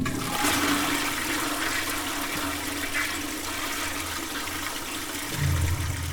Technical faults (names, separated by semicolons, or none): none